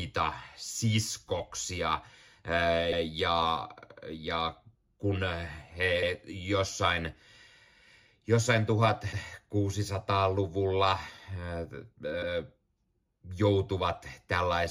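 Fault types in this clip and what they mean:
Overlapping chunks: the speech was handled in 3-second chunks, and each new chunk began 100 ms before the previous one had finished, so that slice plays twice. The doubled fragment is heard as a brief stutter at about 2.92 s and 6.02 s.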